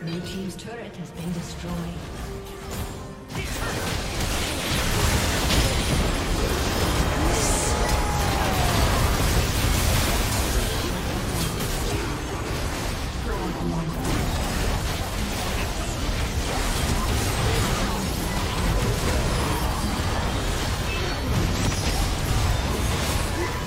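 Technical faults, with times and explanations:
4.77 s and 10.31 s, compressed frames skipped: at each point the audio jumps forward, losing about 200 ms at the first and about 150 ms at the second. Each gap is a handful of whole compressed frames of 26.1 ms that were missing or rejected as damaged by the decoder. Because adjacent frames overlap, each join is a short smeared blip rather than a sharp click, heard as a sudden skip in the sound.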